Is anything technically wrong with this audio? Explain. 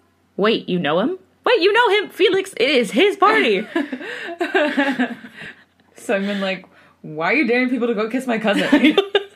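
Yes, there are two spots where compressed frames get skipped, at about 5.46 s and 8.98 s in this speech. A chunk of the coded stream never reaches the output, either missing or rejected by the decoder as damaged, so playback jumps ahead in whole-frame steps, consistent with 32 ms frames. The first jump loses roughly a fifth of a second, the second closer to a third.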